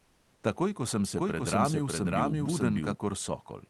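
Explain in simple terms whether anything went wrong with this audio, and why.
Two things went wrong in this speech clip. For the first 0.43 seconds you're hearing comfort noise in place of the background. The sender stopped sending audio during the pause, likely through the call codec's silence-saving mode, so the receiver filled the gap with flat, featureless hiss, slightly quieter than the real room.

Then, right after "ko sem", from 1.17 to 2.95 seconds, there's a doubled audio track. A second copy of the speech, about as loud as the first, trails roughly 0.7 seconds behind, most likely from a slower second capture path. It switches in and out abruptly, with no room echo.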